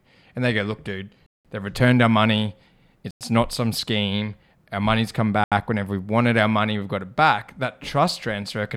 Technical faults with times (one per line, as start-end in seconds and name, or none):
1.26-1.45 Bluetooth stall
3.11-3.21 Bluetooth stall
5.44-5.52 Bluetooth stall